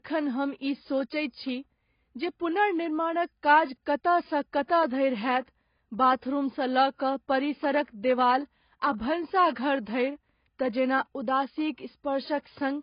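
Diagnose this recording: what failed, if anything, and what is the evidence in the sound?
Codec stage: nothing above 5.1 kHz throughout the speech, two smears stacked together, likely transcoding between lossy codecs, fitting low-rate AAC re-encoded as MP3.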